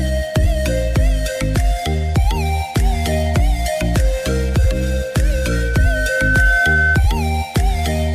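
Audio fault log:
5.23–7.07 s loudspeaker feedback squeal: a steady 1.5 kHz tone swells over about a second to roughly 5 dB above the sound, as the mic-speaker loop exceeds unity gain. A single, growing pitch distinguishes it from hum or broadband noise.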